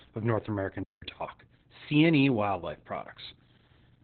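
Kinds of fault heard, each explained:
Opus voice compression: The speech was squeezed through Opus at a very low rate, probably around 8 kbps, using its SILK linear-prediction coder in narrowband mode, which discards the upper band and describes the excitation only coarsely. Throughout the clip nothing is heard above about 4.2 kHz, so the speech sounds muffled and boxed-in, with dull consonants. The coarse excitation adds a hoarse, slightly robotic grain, and the damage is heavy from start to finish.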